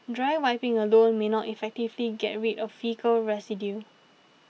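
No technical faults are audible.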